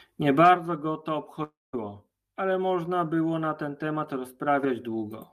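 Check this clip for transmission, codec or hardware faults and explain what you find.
The clip has one fault: a long network dropout from 1.43 to 1.75 s. The speech breaks off and the last sound carries on as a buzzy continuation that fades out, then drops to silence for about 0.2 s before the speech returns, with roughly 0.3 s of material gone. The likely cause is an interruption on the transmission path, with the receiver's concealment covering only the start of the gap.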